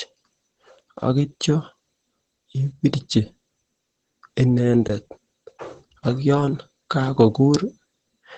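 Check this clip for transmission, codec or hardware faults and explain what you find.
Two faults are audible: codec damage across the whole recording and one brief dropout.

Opus compression: throughout, the speech sounds muffled and hoarse, with nothing above about 8.9 kHz. That narrowed band and rough texture fit Opus's SILK speech mode, likely at a low bitrate near 12 kbps, which trims bandwidth and detail heavily.

Block of digital silence: at 4.88 s there is a short hole where the sound drops out for about 19 ms. The signal cuts to silence and back without any fade, and that kind of gap points to an output buffer that wasn't filled in time.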